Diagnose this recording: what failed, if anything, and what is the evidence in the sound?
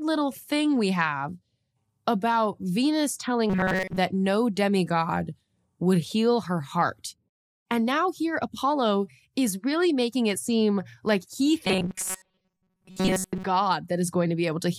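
Robotic sound from repeated short buffers at 3.50–3.98 s, before "no demigod would heal", and 11.66–13.44 s, after "it seem like he". A rigid 188 Hz buzz follows the speech only roughly. Likely a starved buffer repeating blocks of about 5.3 ms.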